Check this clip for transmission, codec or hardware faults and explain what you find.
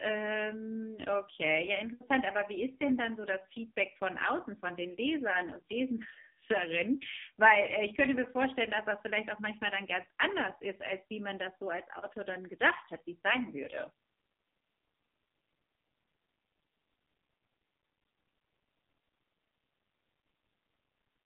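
Heavy codec damage runs through the whole speech clip. Throughout, the voice sounds buzzy, thin and synthetic, with nothing above about 3.7 kHz and the audible band held to roughly 150 Hz to 3.6 kHz. This is the AMR narrowband mobile codec. It rebuilds speech from a vocal-tract model fed by a few pulses in each 5 ms, and the coarse, artificial texture points to a low mode, around 5.15 kbps.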